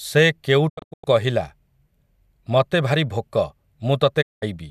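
Digital broadcast dropout at 0.68 to 1.05 s and again at 4.21 to 4.44 s: the receiver stopped getting valid frames and muted, fading out over 20 ms. The first breaks the speech into several short holes, the longest 96 ms. The second is a single gap. Nothing sent during either comes back.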